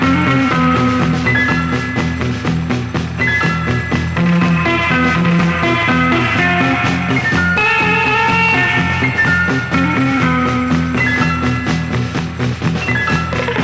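No faults can be heard anywhere in this recording.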